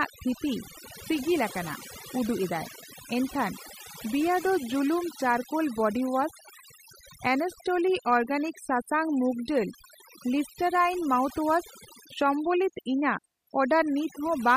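Overdone noise removal runs through the whole speech clip. The noise reduction was pushed far too hard. Each frequency band that sits close to the tool's picture of the background noise gets pulled down steeply or shut off, and the softer parts of the speech fall below that line and are stripped out with the noise. Between phrases the background drops to near silence scattered with twinkling specks.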